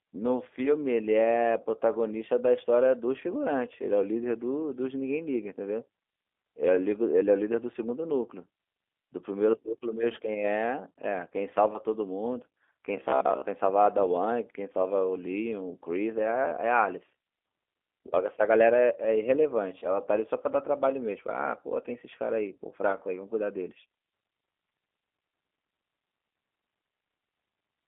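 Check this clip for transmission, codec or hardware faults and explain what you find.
Three faults are audible: low-bitrate codec damage throughout, a robotic buzz near 13 s, and a concealed dropout near 19.8 s.

G.729 codec, throughout: 8 kbit/s model-based coding clearly roughens the speech; a spectrogram shows energy confined to about 300 Hz–3.6 kHz with smeared harmonics.

Robotic sound from repeated short buffers, 12.97–13.46 s: a rigid 66.8 Hz buzz, likely from replaying roughly 15 ms chunks; the waveform shows roughly repeating cycles, with visible striping on a spectrogram.

VoIP packet loss concealed by the speech codec, 19.79–19.96 s: a 30 ms gap, fitting one lost packet, is filled by extrapolated sound that fades; the waveform shows a dip that recovers slowly.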